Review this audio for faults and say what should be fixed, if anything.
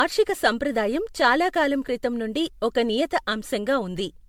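Generation loss runs through the whole clip: the speech sounds swirly, hollow and smeared, with blurred consonant onsets and nothing above 19.9 kHz. This likely comes from around seven successive MP3 decode-and-encode passes, consistent with 96 kbit/s, each adding fresh quantisation noise and spectral holes on a shifted frame grid. To prevent it, keep an uncompressed or lossless master and encode to a lossy format only once, at the final step.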